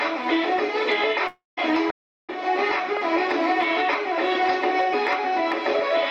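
Throughout the clip there is gain pumping, with the level swinging by around 10 dB. The likely cause is input gain set far too high, with a fast limiter clamping down on peaks, so the sound is squashed rather than merely loud.

From 1.27 to 1.59 s comes a long network dropout, likely from packets that never arrived. The last sound is stretched into a fading buzz or hiss, then true silence, and the audio resumes with about 0.3 s missing. That gap, plus the synthetic fill, distinguishes it from a stall.

From 1.90 to 2.30 s the output simply goes dead for about 0.37 s, a playback stall likely caused by the player starving for data or its thread being blocked. No buzzing fill precedes it, and the sound then picks up again.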